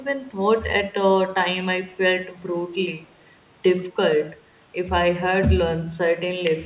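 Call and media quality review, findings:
Faint delayed copy of the speech, 2.94 to 3.13 s. Lags the original by 123 ms, very low in level. Echo leak. Likely a far-end loudspeaker whose echo canceller left residual microphone pickup, which was sent back. Band-limited to 4 kHz, consistent with a G.711 call path.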